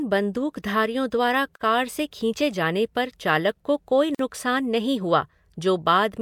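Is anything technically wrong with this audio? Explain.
Yes. Two gaps at a join of encoded pieces: 1.56–1.61 s (about 48 ms, after "बंदूकधारियों द्वारा", before "कार से खींचे जाने") and 4.15–4.19 s (about 47 ms, after "पर चालक को कोई"). Separately encoded segments were joined untrimmed, keeping encoder delay and end padding, so the speech drops briefly to silence with smeared edges, then resumes.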